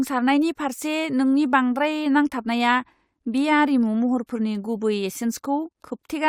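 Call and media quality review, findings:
No faults found in the speech audio. No defects to log against any component.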